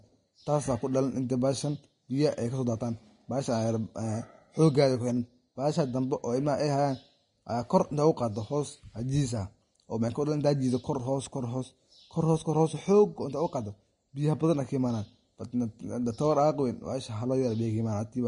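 Vorbis compression runs through the whole clip: nothing sounds above 10.6 kHz, and the treble is plainly hissy and grainy, with blurred attacks. The likely cause is a low-quality Vorbis encode, fitting about 32 kbps, which quantises the upper band so coarsely that fine detail turns to noise.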